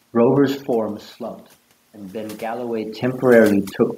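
Across the whole clip, overdone noise removal is at work: the suppressor treats the room noise as something to erase, so individual frequency bands are pulled far down or shut off, leaving near-silent gaps with twinkling specks. Quieter parts of the speech are caught as well.

From 1.92 s to 3.09 s, automatic gain rising follows a drop in level of about 15 dB. The control lifts its gain by about 4 dB over roughly a second, so speech and background swell together.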